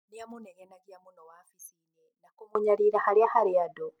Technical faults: one channel inverted

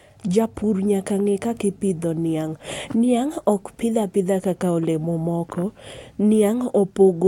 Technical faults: none

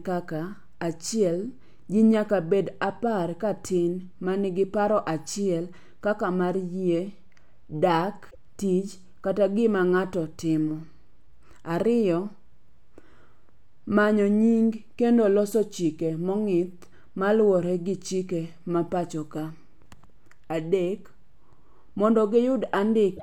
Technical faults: damaged data in a compressed stream

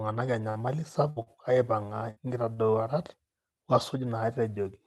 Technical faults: burst of packet loss; short stall from a late packet

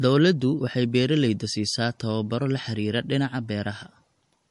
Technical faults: MP3 compression

